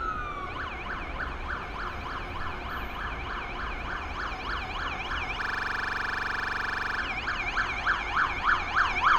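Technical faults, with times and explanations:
5.42–7.00 s, system hang loop: a single 42.67 ms slice repeats exactly about three dozen times, which fits a stalled driver replaying a 2048-sample ring buffer. At 23.4 Hz it gives a rattling stutter rather than dropout gaps, and the sound resumes with essentially nothing lost.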